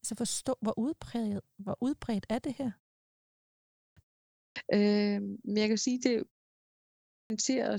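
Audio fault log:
3.69 s, 4.28 s and 7.01 s, clipped start after a pause: each time the speech resumes from silence, its opening is missing. About 0.28 s is lost at 3.69 s after a 0.97 s pause, about 0.28 s at 4.28 s after 0.32 s, and about 0.29 s at 7.01 s after 0.78 s. The output device has dropped into a low-power state during the gap and needs that long to wake again, so the first sounds are cut off. Muted pauses, where only the background drops out in the gaps, lose no speech.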